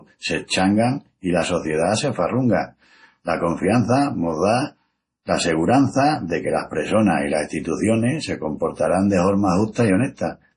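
Throughout the recording the speech has a watery, swirling quality, with a metallic chirp on s sounds and consonant attacks smeared rather than crisp, and nothing is heard above about 10.5 kHz. This is most likely heavy MP3 compression at a low bitrate, which fits roughly 32 kbps. With too few bits, the encoder cuts the treble at a fixed frequency and zeroes weak frequency lines, which flicker on and off from frame to frame.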